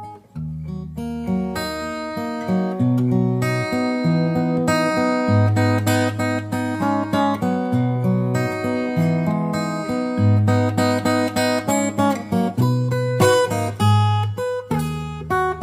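Nothing in the audio stood out as a technical problem on listening.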